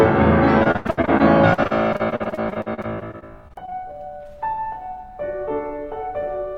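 From 0.63 to 3.98 s the music turns choppy, with a rapid string of roughly thirty short holes, the longest about 87 ms. This is repeated packet loss (robotic sound): the receiver patched each gap by extending the previous sound, concealing about a quarter of that stretch.

Overlapping its tail, from 3.58 to 4.18 s the music drags to 88% speed at unchanged pitch, with drawn-out sounds. This is a jitter buffer slow-down: the receiver repeated single pitch periods to rebuild its reserve, adding 82 ms.

From 5.77 to 6.54 s the music rushes at 108% speed, keeping its pitch but losing its steady tempo. This jitter buffer speed-up came from the receiver trimming short pitch-period pieces to reduce excess buffered delay, dropping about 70 ms in total.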